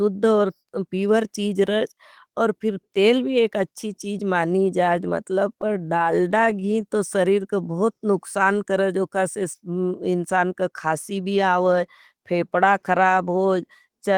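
From 5.61 to 6.90 s the speech stutters with repeated stalls. Packets kept arriving late, so the receiver held the last sound over nearly twenty brief gaps, none longer than about 21 ms. Unlike packet loss, nothing is dropped. The audio just drags in halting jerks.

From 7.72 to 8.11 s a jitter buffer slow-down stretches the speech to 88% speed, adding 55 ms as single pitch periods are repeated to rebuild the reserve. Pitch stays the same, so it sounds smoothly drawn out rather than choppy like the stutter.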